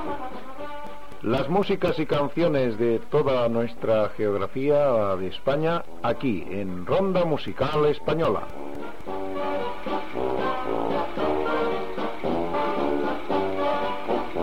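From 0.61 to 2.90 s, and again from 7.48 to 9.26 s, you get CD scratch ticks, about four or five a second, the longest about 4 ms. A blemish is beating the error correction once per disc revolution, and the player patches the gaps.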